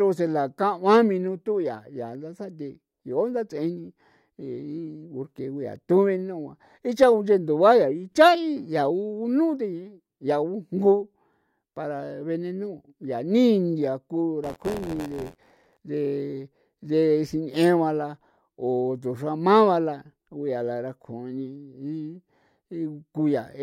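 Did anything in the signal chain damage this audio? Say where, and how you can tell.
Yes, at the driver or buffer stage: buffer tearing from 14.43 to 15.77 s. The application writing the ring buffer and the hardware reading it have drifted into each other's path, so each period splices in roughly a tenth of audio from about 40 ms earlier, with hard joins on both sides. Those repeated splices become a robotic buzz at 86.1 Hz on the speech, a rate that fits a 512-sample buffer.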